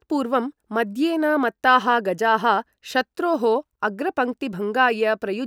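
No technical faults are audible.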